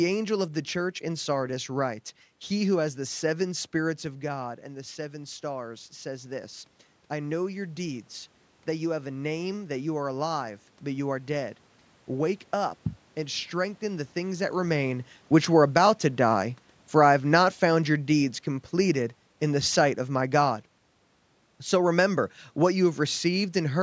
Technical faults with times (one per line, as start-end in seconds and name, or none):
2.99-9.84 automatic gain rising
14.70-20.42 automatic gain falling